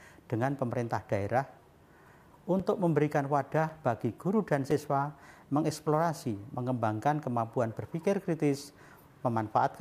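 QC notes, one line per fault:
2.60 s, 3.69 s, 4.71 s: block of digital silence, 5.8 ms gaps fitting a 256-sample buffer underrun; too short to hear as silence, each is heard as a tick or dip, with abrupt edges showing as vertical broadband spectrogram lines.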